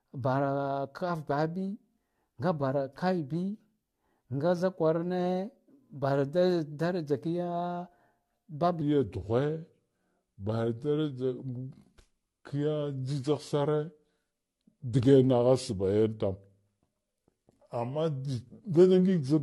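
From the start the speech carries generation loss: a swirly, hollow, smeared texture with blurred attacks. The likely cause is AAC-LC encoding repeated several times, each pass at a rate that points to roughly 64 kbit/s, stacking fresh quantisation noise.

At 8.81 s a section at the wrong speed begins and runs to the end. Playback drops to 0.827 times the original rate, so the speech turns slower and deeper, about three semitones lower, likely from being played against a mismatched clock.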